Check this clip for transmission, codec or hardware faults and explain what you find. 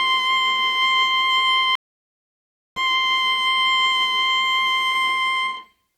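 There is one fault in this music clip, a stream reconnect. At 1.75 s the music stops dead. Silence follows for 1.01 s, until 2.79 s. The connection dropped, and the player waited, reconnected and started a new decoder partway through the stream. When the music returns, it does not pick up where it left off. It jumps ahead by about a second, as a live stream does, so a stretch of the music is simply missing.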